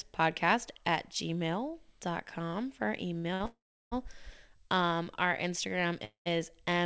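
Just after "for our", two short stalls from a late packet occur at 3.18 to 3.26 s and 3.34 to 3.42 s. Each holds the last sound about 60 ms too long with a slight buzz or dip, then resumes with nothing lost. Unlike a freeze, there is no fade and no silence.

At 3.46 to 3.94 s, a call audio freeze occurs. The sound decays into a gap, about 0.35 s of it silent, likely from packets held up long enough to empty the jitter buffer. A shorter freeze at 6.05 to 6.28 s includes about 0.12 s of silence. The audio then resumes where it stopped. Throughout, the call path passes nothing above 8 kHz, which fits G.722.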